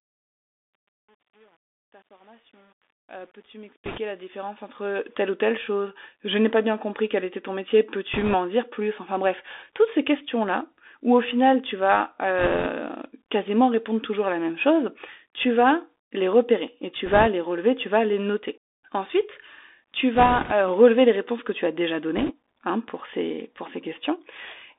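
Throughout, the speech sounds thin and boxed-in, with a grainy hiss underneath and scratchy s sounds. That is the Bluetooth CVSD headset codec at 64 kbps: a one-bit, slope-tracking coder whose band here runs only from 250 Hz to 3.6 kHz, with plainly audible damage.

Short bursts of rushing, crackly noise break through at 3.86 to 3.99 s; 8.14 to 8.35 s, between "quel était ton métier" and "dire plus enfin bref"; 12.39 to 12.66 s; 17.06 to 17.28 s, between "les repérer et tu" and "les relever tu vas"; 20.15 to 20.52 s; and 22.17 to 22.32 s, between "que tu as déjà" and "hein pour ces pour". These are bit errors on a Bluetooth voice link, with a few percent of bits flipped in each burst. Because each CVSD bit nudges the level only slightly, the errors come through as a brief wash of crackle rather than sharp clicks.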